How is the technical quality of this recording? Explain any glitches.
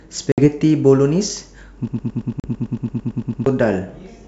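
Two kinds of glitch affect this wideband G.722 speech, whose coding at 64 kbit/s leaves at most faint hiss.

Packet loss on an ADPCM call, at 0.32–0.46 s and 2.40–2.50 s: about 60 ms then 40 ms go hard-silent, and the decoder's predictor restarts mismatched, so speech returns slightly distorted, unlike a clean dropout.

Broken-record loop, 1.88–3.46 s: a 112 ms fragment repeats exactly 14 times, likely a stalled stream resending its last buffer; unlike a stutter, nothing new plays.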